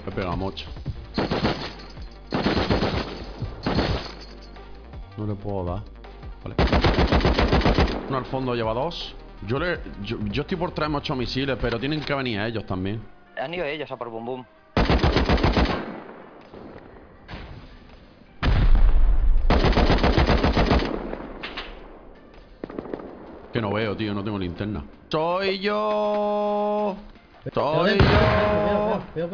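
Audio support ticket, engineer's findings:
No audible faults found in the signal: level, continuity and timing hold steady throughout, with nothing to attribute to any component in the chain.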